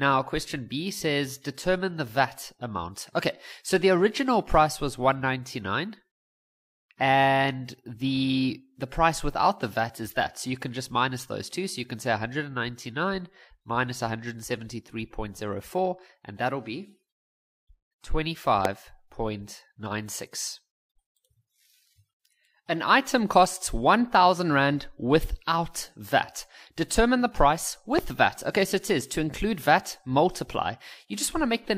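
At 18.65 to 18.67 s there is a loud pop. It is a single sharp pulse, around 20 dB above the surrounding sound. The sound carries on underneath it. A second loud pop follows at 27.99 to 28.01 s, somewhat quieter at around 15 dB above the signal. Each is a likely voltage step or spike, from a plug, switch, static or driver glitch, added to the signal and briefly shaped by the circuits after it.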